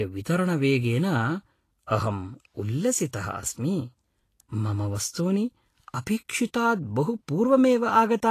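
Throughout, the speech sounds grainy and hissy with roughened tones, likely from Vorbis compression at a low bitrate, around 34 kbps; a spectrogram shows nothing above 14.2 kHz. From 1.86 to 1.91 s, just before "अहं उल्लसितः", pre-echo spreads quantisation noise about 46 ms ahead of the attack. It is heard as a brief hiss and shows as faint noise before the waveform's onset.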